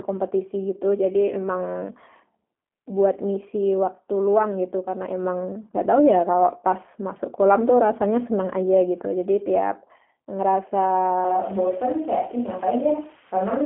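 From the first second to the end, the speech carries the sound of the G.729 codec, with plainly audible damage. The band is squeezed to a telephone line of roughly 200 Hz to 3.4 kHz, with nothing above 3.7 kHz. Each short frame is rebuilt from a vocal tract filter, a pitch predictor and a handful of pulses, so the voice comes out intelligible but rough and slightly synthetic, which fits an 8 kbit/s G.729A stream.

At 11.25 s the sound abruptly turns roomy and hollow and loses bass, and it stays that way to the end. The overall level barely changes, but background room noise now sits audibly under the speech, roughly 25 dB down. The sudden change in character points to a likely switch to a distant microphone, with the close microphone's signal dropped in favour of one further from the talker.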